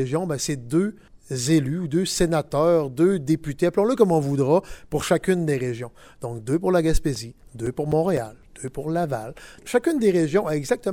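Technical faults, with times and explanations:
6.65 to 8.93 s, CD scratch ticks: ten short ticks recur at a steady rate of roughly four per second, none longer than about 7 ms. A scratch or blemish on the disc surface destroys more data than the error correction can rebuild, and it passes under the laser once per revolution. Each pass leaves a brief gap that the player patches by guessing or silencing the missing samples, which produces this regular ticking.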